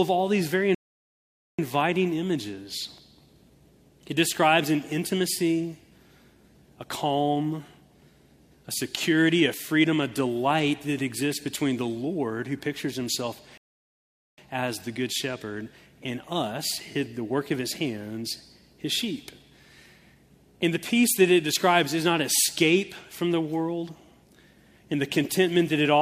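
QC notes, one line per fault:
0.75–1.59 s and 13.58–14.38 s, rebuffering stall: the player's buffer ran dry and playback halted until more data arrived, so the sound drops to silence for 0.84 s, then 0.80 s, and picks up exactly where it stopped, adding time without losing any audio.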